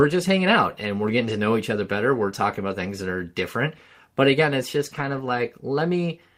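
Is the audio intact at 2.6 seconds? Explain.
Yes, the audio at 2.6 seconds is intact, with no dropout, click, distortion or other fault at that moment.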